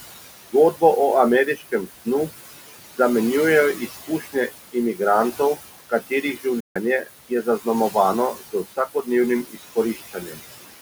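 Noise suppressor artifacts run through this whole speech clip: the room noise, about 13 dB below the voice, is pulled down by about 15 dB between phrases. Speech cut by the noise suppressor occurs at 1.56–2.07, 3.75–5.0, 5.9–6.45, 7.02–7.95, 8.34–9.08 and 9.43–10.4 s, where soft syllables taken for noise drop by about 12 to 16 dB and sound swallowed, briefly in some spans and for nearly half a second in others. A Bluetooth dropout from 6.6 to 6.76 s leaves a 150 ms silence, likely from late packets being discarded, after which the sound resumes further on.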